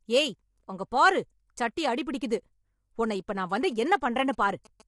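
From start to finish the speech has a rough, grainy texture, with noise filling in between the harmonics, and nothing at all above about 11.6 kHz. That's most likely low-delay AAC compression, the AAC-ELD kind used on video calls. It codes each short frame with a low-delay window, and at a rate that fits something like 32 kbps it can't spend enough bits to keep the fine detail clean. The damage is plainly audible throughout.

Then, right after "உன்னை இப்ப நான் வந்து", from 3.71 to 4.82 s, GSM signalling bursts come in: a galloping dit-dit-dit of short buzzes at 216.7 Hz, sitting roughly 25 dB under the speech. A 2G phone nearby was handling network signalling and sending groups of radio bursts, and the audio circuit rectified those bursts into audible buzzing.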